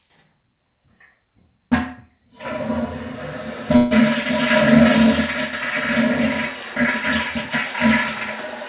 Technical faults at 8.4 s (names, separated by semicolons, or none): none